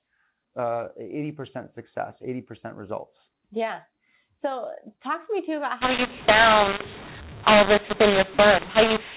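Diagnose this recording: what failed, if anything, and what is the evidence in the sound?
The failure is at the codec stage, where mu-law and A-law were mixed up: A-law-coded telephone audio is decoded as mu-law from 5.81 s, just after "to me too about", to the end at 9.17 s. The 8-bit codes map onto the wrong companding curve, so levels are scrambled and the sound turns harsh. On a waveform, peaks jump and near-silent stretches lift into a noise floor. A spectrogram shows broadband noise filling the pauses, still capped at 4 kHz by the G.711 band limit.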